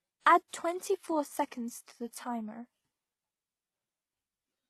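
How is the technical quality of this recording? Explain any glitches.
The recording is compromised throughout by stacked compression damage, which reads as transcoding between lossy codecs.

Across the whole speech clip, the top end stops dead at 12.3 kHz, and the sound carries two layers of artefacts at once: a smeared, swirly low-bitrate character overlaid with a second codec's own fizz. The likely cause is a very low-bitrate HE-AAC encode later re-encoded to WMA at a higher rate. The second encoder spends bits preserving the first one's damage rather than restoring anything. A spectrogram would show a flat ceiling at 12.3 kHz with blotchy, patchy high-frequency texture beneath it.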